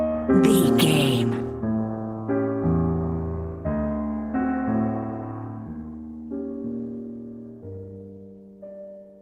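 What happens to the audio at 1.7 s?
Nothing goes wrong at 1.7 s; the audio plays through that moment intact, with no dropout, click, distortion or other fault.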